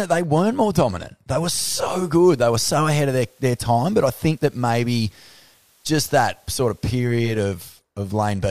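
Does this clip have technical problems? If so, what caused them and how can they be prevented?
Yes. At 1.66 s the audio goes through a digital radio blending to analogue: the receiver lost the digital stream and cross-faded, over about 470 ms, to the FM broadcast of the same station, then blended back at 7.44 s. In between, FM hiss sits under the speech at roughly 40 dB down, though the level stays matched. A better antenna, or capturing from the digital stream or a direct feed, would keep the receiver from dropping to FM.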